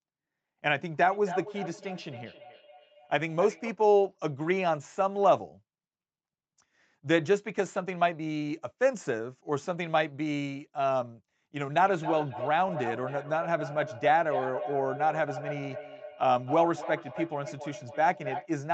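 From 1.01 to 3.8 s, and again from 11.8 to 18.52 s, a feedback echo between two devices returns the speech roughly every third of a second, peaking at about −13 dB and then about −9 dB. Unlike room reverberation, the repeats are discrete and evenly spaced, each thinner and more ringing.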